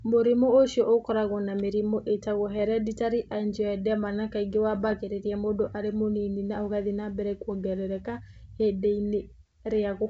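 Bit errors on an ADPCM link at 2.59–2.65 s, after "ũkoragwo na mĩrimũ ĩtagwo", and 4.75–4.95 s, before "mũndũ arĩ mũnini na": flipped bits corrupt the decoder's step size and predictor, causing rough pops and level jumps.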